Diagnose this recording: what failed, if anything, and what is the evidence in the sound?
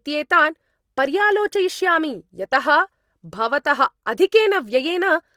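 The codec stage has failed: speech throughout carries a noisy, grainy roughness with little swirling, likely Opus compression in its music mode near 24 kbps. Bands are noise-filled rather than emptied, which separates it from MP3, and content reaching 20.3 kHz rules out narrowband muffling.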